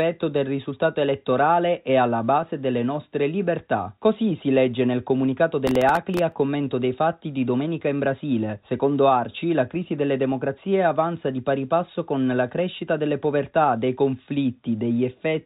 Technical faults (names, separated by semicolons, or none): clock drift between sender and receiver; repeated timing corrections; processor overload crackle